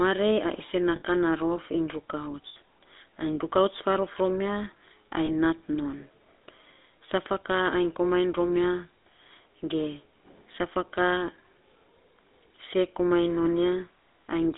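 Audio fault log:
Throughout: GSM full-rate codec. The sound is buzzy and gravelly. The codec drives a vocal-tract model with sparse, regularly spaced pulses, which causes the roughness. Only 250 Hz to 3.7 kHz passes, so the sound is narrow. The damage is plainly audible and fits 13 kbps GSM full rate.
0.96–1.02 s, 2.48–2.57 s and 5.26–5.29 s: lost GSM frames. Each gap lasts about 60, 80 and 20 ms. The decoder repeats the settings of the last good frame. That makes a brief rough, metallic ring instead of a clean dropout.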